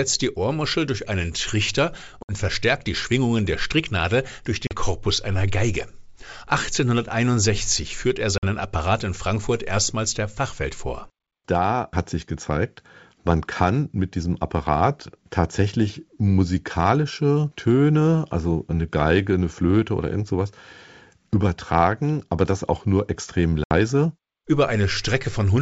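Packet loss on an ADPCM call cuts hard silent holes of 40 to 70 ms at 2.23, 4.67, 8.38 (after "führt er") and 23.64 s (after "das auch nur extrem"). After each hole, including before "verstärkt die", the decoder's predictor is out of step. Sound returns with brief, slight distortion.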